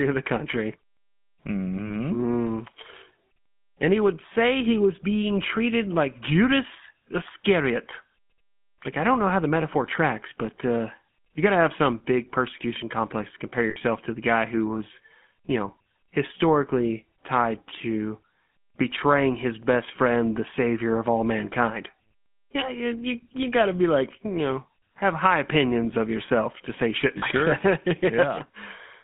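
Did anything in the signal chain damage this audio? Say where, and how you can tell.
Yes. At the codec stage, the whole recording has passed through the GSM full-rate codec, and the damage is plainly audible. The speech has that buzzy, gravelly texture that comes from rebuilding the voice from a vocal-tract model driven by a sparse pulse train. The band is a phone line's, roughly 150 Hz to 3.4 kHz. On a spectrogram everything above about 3.4 kHz is empty, with a hard shelf at the top and coarse, smeared harmonics below it. That fits a 13 kbps full-rate stream.

At the network stage, the call dropped GSM frames in three places: 1.86 s (about 40 ms), 13.70 s (about 60 ms, between "persecution complex to compare" and "to the guy who"), and 27.18 s (about 40 ms, right after "yourself to say shit"). At each gap the decoder repeats the last good frame instead of going silent, so the sound hangs as a short metallic ring. 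On a spectrogram that shows as a frozen, flat-topped stretch of the same spectral shape where the speech should keep moving.

At a buffering or transport stage, at 19.63 s, between "tied to betraying his" and "friend the savior of", there is a tiny stutter from overlapping chunks. The audio was handled in blocks of about 10 s, and the block starting there begins about 7 ms before the previous one ended, so that sliver plays twice. It comes across as a click. On the waveform you'd see a small discontinuity and a repeated few-millisecond pattern at the join.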